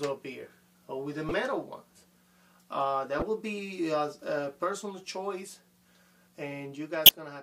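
Three short bursts of corrupt frame decoded occur at 1.28–1.32 s, 3.20–3.22 s and 7.06–7.14 s. Damaged compressed frames were played anyway, scattering energy into wrong frequencies. They span roughly one to three frames, and the last is loudest.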